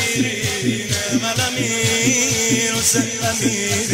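No dropouts, distortion, noise bursts or timing errors turn up anywhere in the recording.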